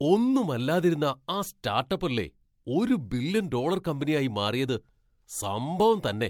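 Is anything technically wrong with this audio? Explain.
Yes, there's generation loss running through the whole speech clip. It has that swirly, smeared, hollow character, with consonant attacks blurred and a band-limit around 19.9 kHz. The likely cause is repeated MP3 encoding, around four passes at what sounds like 96 kbit/s. Each pass re-quantises on a shifted frame grid, so noise and spectral holes pile up, and it ends up sounding worse than a single encode at that rate would.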